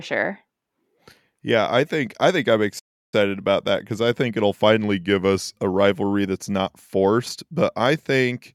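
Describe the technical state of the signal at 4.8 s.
At 4.82 s the speech drops in pitch and slows. It stays about 5.4% slow and roughly a semitone flat, near 96 cents, until 5.56 s, then snaps back. This is a drift correction step, likely a clock-matching resampler briefly changing playback rate to rebalance its buffer.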